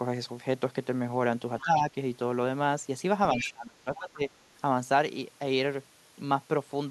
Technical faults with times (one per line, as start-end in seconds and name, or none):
1.59-1.64 other side's voice leaking through
1.63-1.96 speech suppressed in double talk
3.34-4.30 speech suppressed in double talk
3.40-3.51 other side's voice leaking through